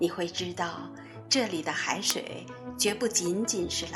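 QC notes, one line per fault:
2.10 s, uninitialised buffer: a buffer was played before audio was written to it, so leftover memory came out as a loud crack about 0.67 ms long, which fits a 32-sample block. On the waveform it is a brief spike, and the spectrogram shows a thin broadband vertical line.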